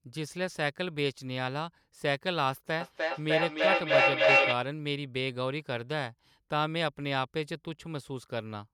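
From 2.81 to 4.65 s, feedback echo between two devices. Ringing repeats return roughly every 300 ms and pile up to about 8 dB above the speech.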